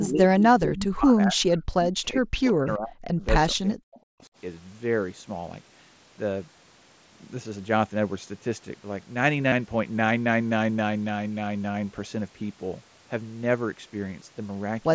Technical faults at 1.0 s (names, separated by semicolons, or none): speech suppressed in double talk